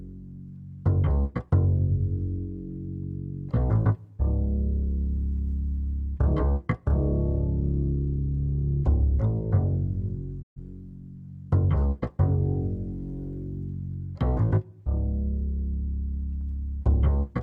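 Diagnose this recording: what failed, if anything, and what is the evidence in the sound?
A digital broadcast dropout failed in the reception and decoding stage. At 10.41 s the sound fades out over about 20 ms and stays silent until 10.59 s, when it returns mid-programme. The gap swallows about 128 ms of material, which fits roughly three lost frames. The receiver stopped getting valid frames, either from signal loss or checksum failures, and muted its output. Whatever was transmitted during that hole is gone, not delayed.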